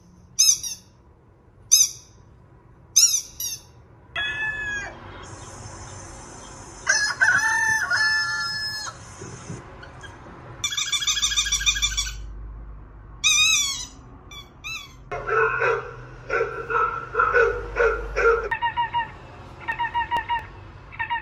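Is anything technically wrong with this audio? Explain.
Yes. From 19.72 to 20.62 s, five sharp, evenly spaced ticks, each a tiny dropout of a couple of milliseconds at most, sound as CD scratch ticks: a surface blemish corrupted more data than error correction could repair on each disc revolution, so the player patched or muted those samples.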